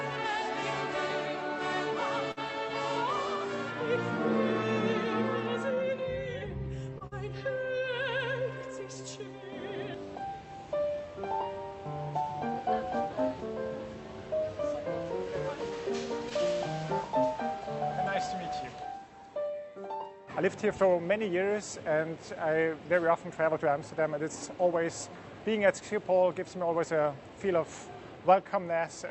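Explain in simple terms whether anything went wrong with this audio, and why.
Three kinds of fault can be heard, all typical of audio sent over an internet call.

At 2.31 to 2.39 s, and again at 6.98 to 7.03 s, a sound hangs on for a moment longer than it should, with a faint buzzy or dipping quality. Each is a short stall from a late packet. A piece of audio arrived late, so the receiver stretched the last sound, about 54 ms the first time and 27 ms the second, to cover the wait. It then carried on from the right place, so nothing is lost.

Right after that, at 7.07 to 7.14 s, the sound briefly turns into a held, fading tone and then jumps ahead. This is a burst of packet loss. Several pieces of audio in a row never arrived in time. The receiver covered the gap by continuing and fading the last sound, and about 40 ms of the original audio is simply missing.

From 24.20 to 24.54 s the audio briefly runs quicker, about 112% of normal speed, and sounds hurried even though the pitch stays the same. 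This is a jitter buffer speed-up. The receiver had built up more waiting audio than it wants, so it cut out many tiny slices, around 50 ms in total, to catch up. All of this happened on a call path whose codec keeps sound only up to 8 kHz.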